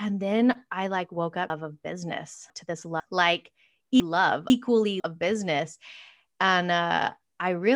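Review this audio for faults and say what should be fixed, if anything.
Chunks out of order occur twice in this speech: from 1.5 to 3.0 s, just after "then I like woke", a 500 ms chunk plays two chunks late, and from 4.0 to 5.0 s, before "of business", one chunk plays late. Each reordering leaves three hard joins, which show as waveform steps where syllables jump. Reorder chunks by sequence number or timestamp in the jitter buffer before writing or playback.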